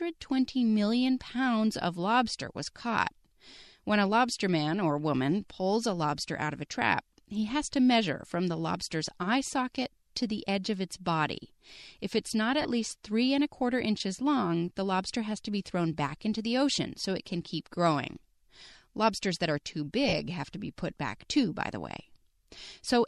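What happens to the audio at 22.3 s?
Nothing goes wrong at 22.3 s: the speech carries on intact through that moment, with only the light, steady trace of lossy compression that runs under the whole recording.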